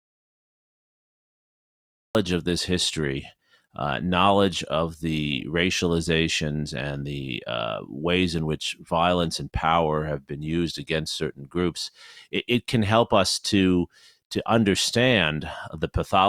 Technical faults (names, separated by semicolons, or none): audio dropout to silence